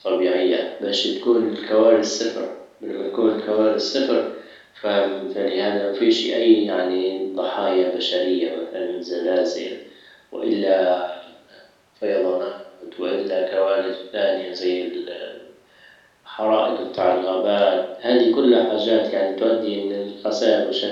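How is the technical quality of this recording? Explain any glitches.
A single loud pop mars the speech, from 16.98 to 17.00 s, just before "الغابات هادي كلها حاجات". It is a sharp thump peaking a little above the voice. A sudden voltage pulse, likely from a plug, switch or static discharge, was added and shaped by the following circuitry. Unlike a dropout, the speech continues underneath without any gap.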